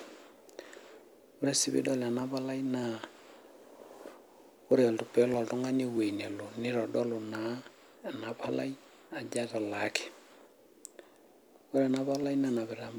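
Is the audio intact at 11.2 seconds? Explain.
No. At 11.2 seconds the speech sits inside a run of regular clicks lasting from 0.33 to 12.86 s, recurring every 0.63 s. These are likely clock drift buffer slips: two clocks disagreeing by around 500 ppm let a buffer creep until a tiny block of roughly fifteen samples is dropped or repeated. Unlike packet-loss dropouts, the clicks come at a strictly even interval and leave no audible gap.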